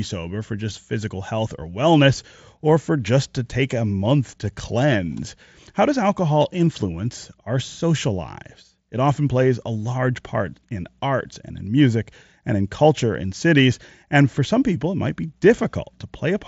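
No faults in this speech; the Bluetooth mSBC headset link is working as designed, passing audio up to 8 kHz with the light grain that codec puts on loud passages.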